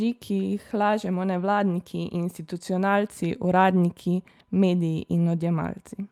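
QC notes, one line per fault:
No faults heard in this clip.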